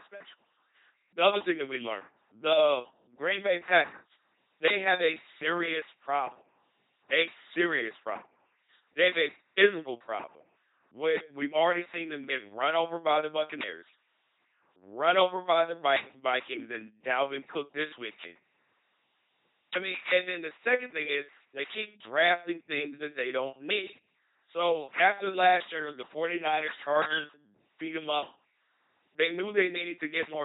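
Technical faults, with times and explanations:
Throughout, LPC-10 vocoder: buzzy, mechanical robot speech with stray hiss and buzz, nothing above 3.9 kHz; a pulse-or-noise source drives a ten-pole filter, fitting 2.4 kbit/s coding.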